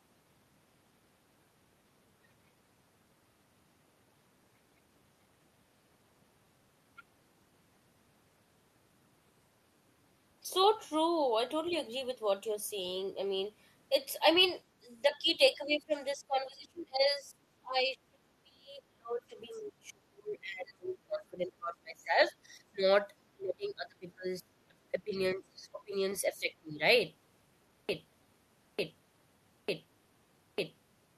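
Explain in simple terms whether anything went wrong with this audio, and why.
A few things went wrong in this speech recording, mostly toward the end.

Around 11.71 to 11.76 s and again at 19.52 to 19.61 s, there are tiny, faint scraps of the other side's voice leaking through. That's likely the far end's audio coming out of the talker's loudspeaker, getting picked up by the mic, and not fully cleaned out by the echo canceller.

From 14.8 to 22.85 s, 23.33 to 25.94 s and 26.28 to 26.82 s, the talker's voice keeps ducking down hard. That's speech suppressed in double talk. Both sides were probably talking at once, and the canceller turned everything down because it couldn't tell the talker from the echo.

From 27.89 s right to the end, a chunk of just under a second plays over and over, like a broken-record loop. Something in the playback or streaming chain likely stalled and kept resending its last piece, so whatever should have come next is gone.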